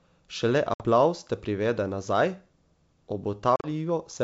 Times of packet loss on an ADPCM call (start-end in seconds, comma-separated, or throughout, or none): 0.74-0.84, 3.56-3.67